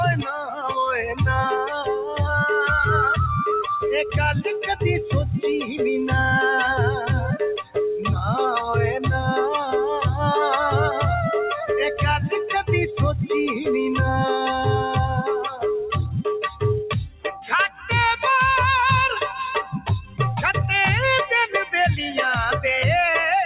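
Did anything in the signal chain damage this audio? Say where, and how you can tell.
Yes. In call processing, a speech-tuned noise suppressor was left on throughout. It treats steady tones and decays as noise, so the sound pumps by about 5 dB. The band stops at 4 kHz, which fits the G.711 mu-law call path.

The same suppressor also made sharper cuts at 0.25–0.77, 1.66–2.2, 7.57–7.76, 15.47–15.64, 16.47–16.63, 17.07–17.45, 17.68–17.89 and 19.63–20.19 s. In these spans, held sound and tails sink by up to about 17 dB.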